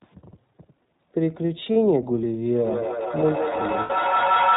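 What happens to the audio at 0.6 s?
At 0.6 s the speech carries iLBC codec damage, present throughout. Nothing above 4 kHz survives, and each 20 ms frame's excitation is coded independently, giving a plainly rough, synthetic texture. That grain, not just the dull narrowband sound of a plain telephone band-limit, marks it as iLBC.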